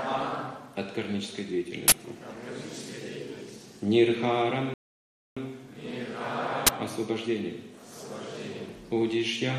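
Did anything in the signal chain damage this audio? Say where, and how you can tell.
Yes. Two short, loud cracks or bursts of digital noise interrupt the sound, from 1.88 to 1.92 s and from 6.67 to 6.69 s. This is an uninitialised buffer at the driver or buffer stage. Blocks of 40 ms and 20 ms were played before audio was written, so leftover memory came out as samples.

At 4.74 s the sound cuts to silence. At 5.37 s it picks up exactly where it left off, with nothing missing. This is a rebuffering stall in network playback: the player ran out of downloaded audio and waited, adding 626 ms to the running time.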